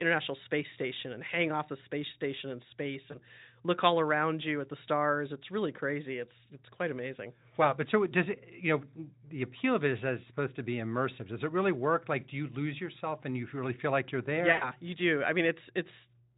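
VoIP packet loss concealed by the speech codec occurs at 3.11 s, after "space station in space", and again at 14.51 s, after "feel like you're there". Each time, the decoder lost incoming audio and extended its last pitch and filter at falling gain. The first gap fits a single lost 20 ms frame and leaves a brief smear until 3.19 s. The second, about 100 ms lost, becomes a fading buzzy tone or coloured noise, and the sound stays weak until "you do I" near 14.73 s. The Speex coding at 18.2 kbps adds no more than faint damage.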